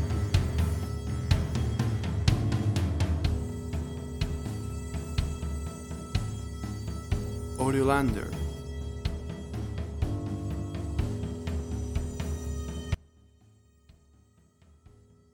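At 12.95 s the signal drops out abruptly and never recovers, leaving only a faint residue roughly 25 dB down until the end. This is an audio dropout, likely a lost feed with the path still live. The waveform collapses to a thin band and the spectrogram fades to a dim wash.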